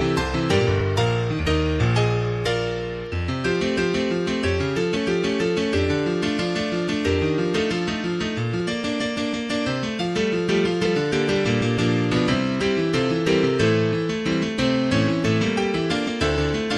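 Damaged data in a compressed stream causes brief blips at 4.95 s, 10.85 s and 16.07 to 16.09 s: corrupted frames make the decoder lose sync and hunt for the next header.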